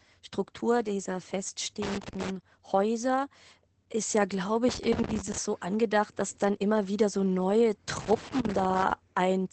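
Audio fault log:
Throughout: Opus voice compression. The speech is cut off sharply with nothing above 8.4 kHz, a wideband limit. The remaining band is coded by a linear-prediction model whose excitation is quantised coarsely, so the speech sounds muffled and slightly hoarse, with a faint robotic edge. The damage is plainly audible and points to the SILK voice coder running at a low bitrate, which fits something around 12 kbps.
1.82–2.30 s, 4.69–5.38 s, 7.96–8.91 s: loose connector crackle. Three irregular bursts of scratchy crackle interrupt the speech. The second comes right after "ist ja glaube" and clears before "so angedacht dass dann". The third follows "immer wieder so neue". A worn or dirty contact is making and breaking rapidly, chopping the signal into fragments. The bursts grow longer across the clip, from about half a second to nearly one second.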